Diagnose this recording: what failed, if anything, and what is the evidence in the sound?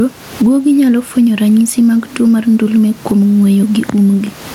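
Throughout the speech the gain swings by around 15 dB, and the level sounds squashed. This is gain pumping, likely from excessive input gain with a fast limiter in call processing clamping each peak.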